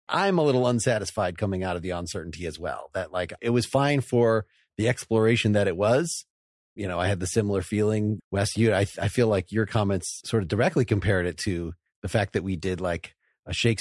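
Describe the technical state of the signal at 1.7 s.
At 1.7 s the speech signal is intact, with no dropout, clipping, glitch or other fault to be heard at that moment.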